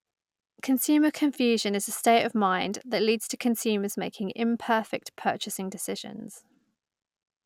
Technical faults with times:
none

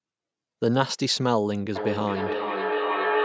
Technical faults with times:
1.76-3.24 feedback echo between two devices

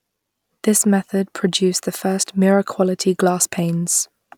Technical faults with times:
none

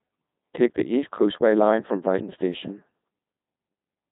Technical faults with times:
0.00-4.12 Codec 2 vocoder
0.11-4.07 clock slip clicks

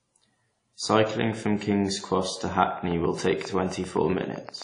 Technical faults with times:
0.00-4.64 WMA compression
2.66-4.63 train of clicks

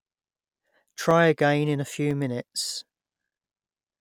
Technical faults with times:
0.10-3.11 periodic USB or driver dropouts

